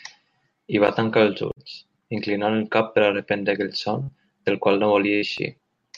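At 1.51 s, just after "I va tancar els", a burst of packet loss cuts into the speech. Consecutive packets failed to arrive in time, so the receiver stretched the last received sound for about 50 ms while fading it. Playback then resumes at "inclinant el cap per" with roughly 60 ms of speech missing. The same fault recurs at 4.02 s after "per a reprendre aquell", with about 57 ms of concealment and 60 ms lost.

From 5.02 s to 5.74 s, CD scratch ticks appear: five short ticks, at roughly seven per second, the rhythm of a blemish passing under the laser once per disc rotation. Each time, the damage exceeded what error correction could rebuild, so the player interpolated or muted the affected samples. The longest of these tiny gaps lasts about two milliseconds, heard as ticks of uneven strength. A third burst of packet loss falls inside this stretch at 5.16 s, right after "qual no", with about 58 ms of fading concealment and 60 ms of speech skipped.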